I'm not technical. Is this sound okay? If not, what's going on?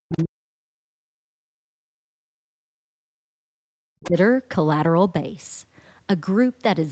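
No, there are two problems. Speech suppressed in double talk runs from 0.02 to 3.52 s and again from 3.75 to 4.16 s: the talker's voice sinks to almost nothing, in patches adding up to about three seconds in the first stretch and under half a second in the second. This is likely because both ends of the call were talking together, and the echo-removal system couldn't tell the talker from the other person's sound, so it turned everything down.

The other side's voice leaking through appears as two faint scraps, from 0.14 to 0.23 s and from 4.0 to 4.06 s. These are brief traces of a second voice, quiet beneath the talker. The likely cause is the other caller playing from the talker's loudspeaker and being picked up by the microphone, with the echo-removal system not cleaning all of it away. The second scrap is clearly louder than the first.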